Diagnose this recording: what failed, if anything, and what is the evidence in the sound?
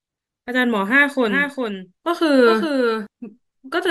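Doubled audio track, likely from a slower second capture path: from 1.29 to 3.07 s, a quieter, dry copy trails about 400 ms behind, starting abruptly.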